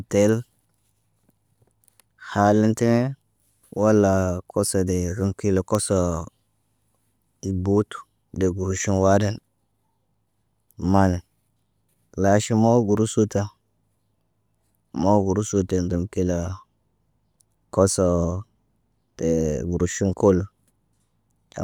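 At 5.75 s, just after "rəŋg kila", a bit error spike lands as a single sharp tick. A flipped bit pushed two adjacent samples to about -9 dBFS before snapping back, so the click is broadband and unrelated to the speech. A quieter repeat at 12.97 s, one sample at about -21 dBFS, gives a fainter tick.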